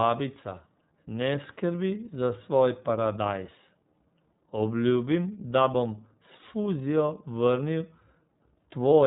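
Throughout, the speech carries iLBC codec damage. Nothing above 3.8 kHz survives, so it sounds narrowband and muffled. Each 30 ms frame is coded on its own, at about 13.3 kbps. The result is plainly rough and synthetic.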